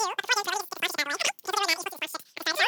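Speech running at three times its natural speed, with the pitch raised by 19 semitones, for the whole clip: a wrong sample rate fault. The sound points to material captured at 16 kHz being played out at 48 kHz with no conversion, so every sample is consumed three times too fast. Duration and pitch shift together by that same ratio, which is why the talker sounds high, squeaky and hurried from start to finish rather than simply sped up.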